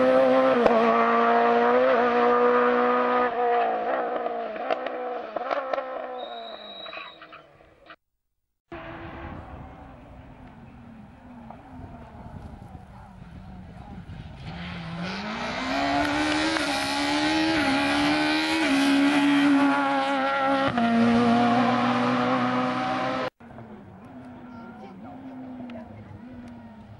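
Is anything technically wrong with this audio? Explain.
No, nothing technically wrong stood out on listening to this audio.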